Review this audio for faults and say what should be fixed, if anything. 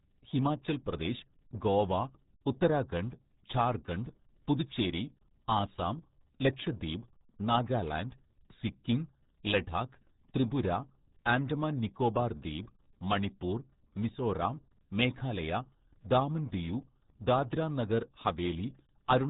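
Throughout the recording, the speech sounds muffled and gargly, with a watery, smeared texture on every syllable and nothing audible above 3.8 kHz. This is heavy RealAudio 14.4 codec damage. That early dial-up speech coder squeezes the signal into a tiny data budget, consistent with an 8 kbit/s stream, by discarding the upper band and roughly modelling what remains. The gurgling comes from that coarse reconstruction. To prevent it, record and deliver through a modern wideband codec at an adequate bitrate, or keep an uncompressed master.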